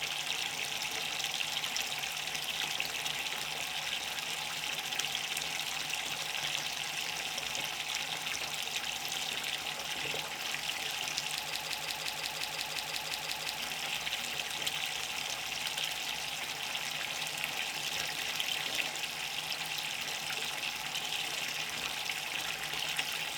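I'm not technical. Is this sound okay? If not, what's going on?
No. At about 11.55 seconds, the player or stream most likely stalled and kept replaying the last scrap of audio it still held. This is called a broken-record loop. A piece about 0.18 seconds long repeats back to back, 12 times, until about 13.59 seconds, giving a stuttering, machine-gun effect for roughly two seconds. Whatever sound should have played during that stretch is missing, replaced by the repeats.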